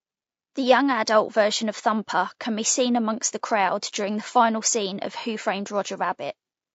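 From start to finish, the speech sounds rough and grainy. A hiss fills the gaps between the pitch harmonics, and the top band sounds dulled and synthetic. The damage is plainly audible. The likely cause is low-delay AAC compression, the kind used in video calls. It codes about 500 frequency lines per frame with a low-delay window. The texture fits a low bitrate around 32 kbps.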